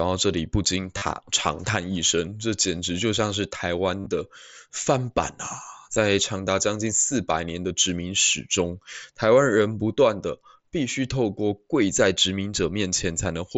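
Concealed Bluetooth headset packet loss occurs at 0.98 to 1.02 s, 4.02 to 4.06 s and 5.94 s. Lost packets were filled by repeating the last stretch of waveform. The longest runs, 37.5 ms, buzz briefly. The 5.94 s gap is shorter, 15 ms.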